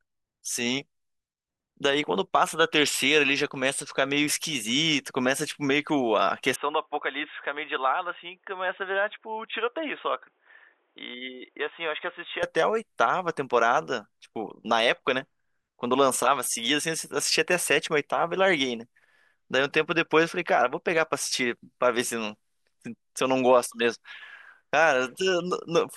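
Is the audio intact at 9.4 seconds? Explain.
No. An input switched to a poorer device, likely, from 6.56 to 12.43 s: speech turns dull, nothing above 3.8 kHz, about 5 dB quieter, with new faint background noise.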